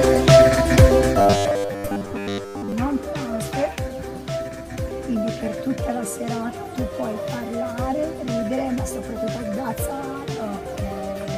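From 1.18 to 2.72 s, new audio likely arrived too seldom, and playback filled the gaps by looping a 10 ms segment for most of it, skipping real audio. This robotic sound from repeated short buffers is a rigid, metallic 100 Hz buzz loosely tracking the sound.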